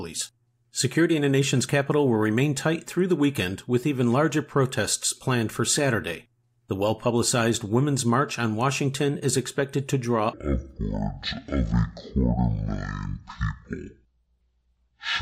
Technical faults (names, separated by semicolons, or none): stereo read as mono